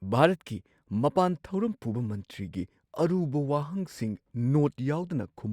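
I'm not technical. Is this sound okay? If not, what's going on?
Yes, nothing stood out as a problem when listening to this recording.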